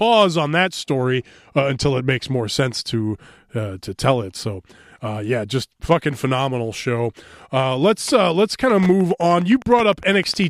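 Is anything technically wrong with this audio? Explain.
Yes. From 8.64 s to the end at 10.50 s, a steady ticking runs beneath the speech at about ten clicks per second, well below the speech level. This is Wi-Fi interference: a nearby Wi-Fi radio's beacon, repeating every 102.4 ms, gets rectified inside the audio circuit.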